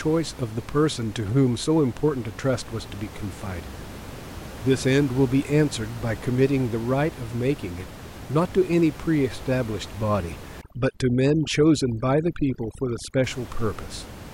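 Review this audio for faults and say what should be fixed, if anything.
Overdone noise removal from 10.61 to 13.24 s: the noise reduction is set far too strong, cutting any frequency band near its noise estimate, including quiet parts of the speech. The room noise, about 16 dB below the speech, drops and breaks up into twinkling specks. Prevent this by lowering the reduction strength so the room noise is softened rather than stripped out.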